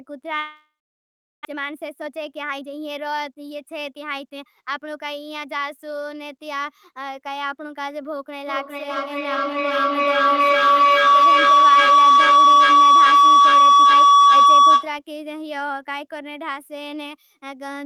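Speech opens with a break from 0.39 to 1.47 s, where the last sound trails off as a fading buzz and then gives way to about three quarters of a second of near-silence, and when the talker returns roughly 0.6 s of speech is gone. This is likely a long network dropout, with the receiver concealing the gap before falling silent and the delay growing by something like 0.4 s. From 1.49 to 4.78 s the speech sounds hurried, running at 113% speed with its pitch unchanged, because a jitter buffer speed-up is repeatedly cutting short pitch-period slices to work off that built-up delay, trimming around 0.4 s in total. From 8.47 to 15.03 s a tone near 1 kHz rises to about 15 dB above the speech and pulses roughly every 0.4 s. That is feedback howl, where a microphone and loudspeaker on the same call form a loop that amplifies this frequency on each round trip until the loop is broken.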